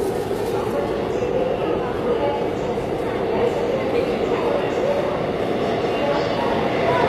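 Throughout, plainly audible HE-AAC compression, likely from a low bitrate, makes the treble gritty and metallic; a spectrogram shows copied upper bands ending at 14.9 kHz.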